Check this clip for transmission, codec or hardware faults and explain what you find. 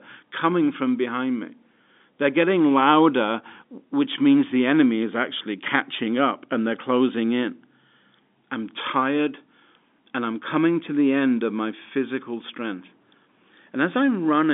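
No transmission, codec or hardware faults turn up in this speech, which comes through an ordinary telephone path whose band runs from about 200 Hz to 3.6 kHz with nothing above 3.7 kHz, consistent with 64 kbps G.711 mu-law coding, and any coding noise is at most faint.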